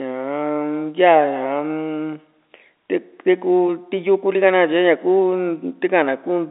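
No technical faults can be heard in the speech, which carries the narrow band of a G.711 telephone line, from about 250 Hz up to 3.7 kHz.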